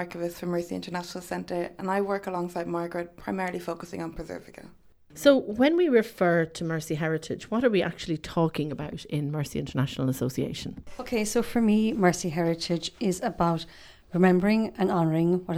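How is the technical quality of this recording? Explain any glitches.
No glitches or faults heard.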